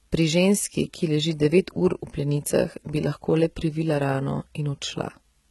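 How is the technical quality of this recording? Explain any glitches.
Heavy compression damage runs through the whole speech recording. HE-AAC compression, throughout, is the likely cause: the lower spectrum is coded sparsely, and the treble is rebuilt from copied lower bands, which fits a rate around 16 kbps. Sibilants sound gritty, metallic or lispy.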